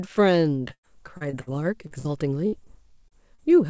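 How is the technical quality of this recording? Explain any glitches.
The quality is rough: the speech comes through a call link that drops audio repeatedly, and the band stops at 8 kHz, which fits a G.722 wideband codec at about 64 kbps.

From 0.68 to 1.49 s there's repeated packet loss with a robotic sound. Five gaps, about 240 ms missing in total, the longest 95 ms. Each hole gets patched by stretching the previous sound, so roughly a quarter of that stretch is filler and comes out choppy.

Short concealed packet loss shows up at 1.87 to 1.93 s, 2.64 to 2.68 s, 3.08 to 3.13 s and 3.35 to 3.40 s, each dropping 20 to 40 ms. The receiver papers over each gap by continuing the last sound, so you hear a brief smear or wobble, and a short consonant can vanish.

There are two bursts of packet loss, at 1.99 to 2.07 s and 2.47 to 2.54 s, each about 60 ms. Here the concealment holds the last sound and fades it, giving a short buzz or hiss before the speech picks up again with that chunk simply gone.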